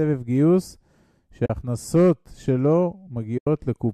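A speech clip with two brief holes from AAC frame loss with muting, at 1.46 to 1.50 s (about 40 ms) and 3.38 to 3.47 s (about 90 ms). Overlapping windows fade each gap softly, unlike a hard dropout's click, over light, likely low-delay AAC coding.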